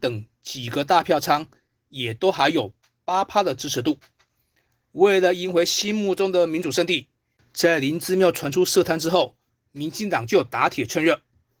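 From start to finish the speech sounds plainly coded: hoarse, faintly robotic, with a thin, grainy top. This is Opus voice compression in hybrid mode, where SILK models the band below 8 kHz with coarse excitation and a sparse CELT layer carries the rest, which fits roughly 16 kbps.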